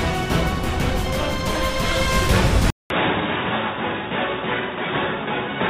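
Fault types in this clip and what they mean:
Input switched to a poorer device: At 2.70 s the sound cuts out for about 200 ms. When it returns, it is dull and boxy, with nothing above 3.8 kHz. It is also a little quieter, by roughly 5 dB. A faint new background noise sits well below the signal. This narrower, quieter sound lasts to the end. The likely cause is the input moving to a lower-quality microphone or a headset's call profile.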